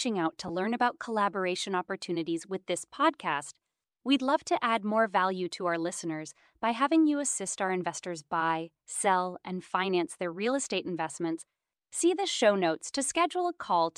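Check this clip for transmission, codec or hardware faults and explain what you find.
There's one fault: a short dropout from lost LE Audio frames at 0.48 to 0.50 s, right after "out to" and just before "learn about collaboration opportunities".

About 15 ms of audio went missing, which fits two 7.5 ms frames dropping over the Bluetooth link. The decoder can't stop dead, so it fills the gap by replaying the last frame's spectrum with scrambled phase. A gap this short never gets long enough to fade toward silence. You hear a tiny grainy smudge in the speech rather than a clean cut. The light codec colouring around it is likely from the LC3 coding itself.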